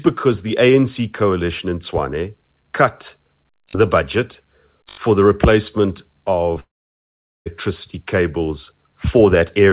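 At 6.6 s a long network dropout begins, likely from lost packets: a brief fading buzz stands in for the sound, then near silence until 7.48 s, with about 0.86 s missing. On a spectrogram the band below 4 kHz goes blank; the waveform flattens.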